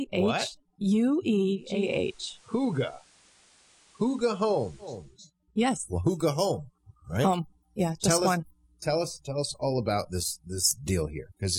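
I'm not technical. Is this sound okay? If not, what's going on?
No. From 1.54 to 5.21 s there is digital radio blending to analogue: the receiver lost its digital signal and faded over about 0.4 s to the station's FM broadcast, so faint hiss appears, then it returns.

From 5.67 s to the end, pre-emphasis left on: the treble boost applied for FM transmission was never undone at the receiving end, so high frequencies stay exaggerated, making the sound thin, bright and harsh on hissy, sharp sounds.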